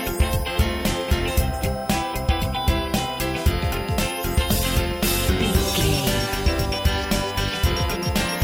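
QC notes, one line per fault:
Throughout: switching supply whistle, a thin high tone wandering between about 4.84 and 5.22 kHz, roughly 25 dB under the programme. A switch-mode supply is running in an audible burst mode or beating with another one, its frequency shifting with load.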